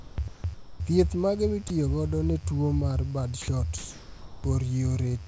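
A mains buzz runs throughout, about 30 dB below the speech. Switching spikes leak in from the 50 Hz supply, giving a raspy drone that shows as evenly spaced horizontal harmonic lines on a spectrogram.

Sound dropped by the voice detector replaces speech with steady comfort noise at 0.00–0.18, 0.28–0.44, 0.54–0.80, 1.68–1.70 just before "godo ne tuo mar", 3.42–3.48 just after "godo ne tuo mar", and 3.78–4.44 s. The sender likely mistook quiet speech for background. On the waveform these appear as flat, low-level stretches, and the spectrogram shows smooth featureless noise within the call path's band.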